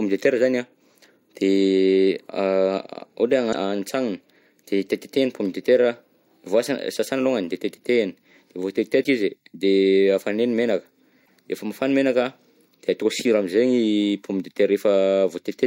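At 3.49–3.54 s, 9.00–9.06 s and 11.22–11.29 s, damaged data in a compressed stream makes the decoder misread frames and lose sync, producing brief chirps, squawks, clicks or short holes. Each appears as a short broadband smear on a spectrogram and a jagged waveform discontinuity.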